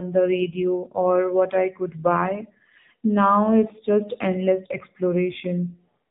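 Throughout, the speech carries AMR narrowband mobile codec damage: nothing above 4 kHz survives, and the low bitrate, which fits about 7.4 kbps, leaves it plainly buzzy and synthetic.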